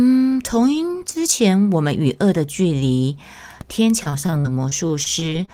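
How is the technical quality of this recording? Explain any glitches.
The recording has one clear problem near the end. Repeated packet loss (robotic sound) runs from 4.03 to 5.49 s. Over that stretch the speech repeatedly drops out in brief holes, about a dozen, the longest around 34 ms. Each gap is patched by stretching the preceding sound forward, and the next loss arrives before the speech recovers. Roughly 17% of the stretch is filled this way, so the speech turns choppy and robotic, with fragments missing.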